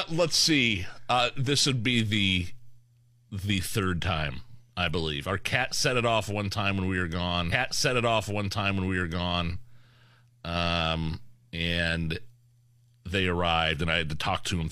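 At 7.48 s a stream segment repeated: the player fetched or queued the same chunk twice, so about 2.0 s of speech plays again until 9.48 s, with a small blip at the jump back. Unlike a buffer stutter, a whole stretch returns intact rather than a tiny looping fragment.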